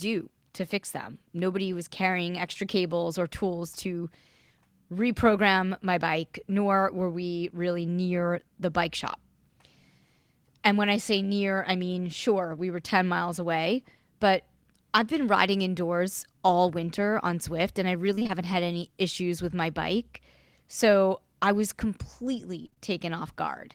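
Sample clock jitter runs through the whole recording. The converter's clock wandered by roughly a microsecond or two, so samples were taken slightly early or late. The resulting error, roughly 40 dB below the signal, is strongest on steep waveform slopes. It is heard as roughness that follows louder and brighter moments and drops away in pauses.

Short concealed packet loss occurs at 2.53–2.57 s, between "was carrying" and "cables or tools to." About 20 ms of audio never arrived in time. The receiver extended the preceding sound for roughly 14 ms before blending back, leaving a brief smear where a short sound may go missing.

Repeated packet loss (robotic sound) occurs at 18.15–18.31 s, after "and I" and before "had any issues with," and again at 22.63–22.80 s. Each stretch has four gaps totalling about 80 ms, with the longest at 21 ms and 23 ms respectively. Nearly half of each span is patched from the previous audio, giving choppy, robotic-sounding passages with pieces missing.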